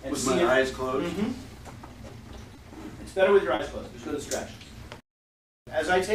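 Short concealed packet loss at 2.55–2.59 s, 3.55–3.61 s and 4.67–4.71 s: 20, 40 and 20 ms of audio arrived too late, so the decoder extended the preceding sound, leaving brief smears or wobbles.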